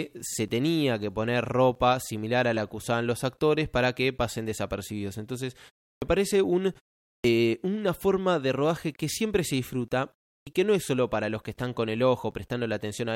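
At 5.97 s, after a pause of about 0.35 s, the first 49 ms of "parece un" are lost. At 7.2 s, after "parece un" and a 0.48 s gap, 43 ms of "una forma de rodaje" vanish. At 10.42 s, between "que siempre se disfruta" and "que no es solo", 47 ms go. This is a clipped start after a pause: the output path idles in silence and wakes late, swallowing onsets. The waveform jumps from flat straight into speech, and the spectrogram lacks the opening energy of each word.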